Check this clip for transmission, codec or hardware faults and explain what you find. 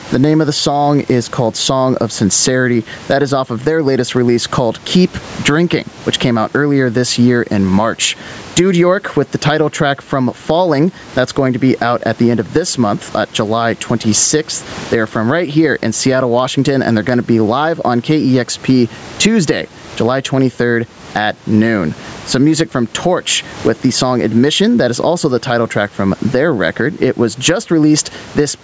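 One fault, and it runs through the whole clip: gain pumping. Mic gain is likely set far too high, so a fast limiter clamps on each loud burst. The gain swings around 20 dB, so everything sounds squashed. The call processing's top end stops at 8 kHz, and room noise sits about 33 dB below the speech.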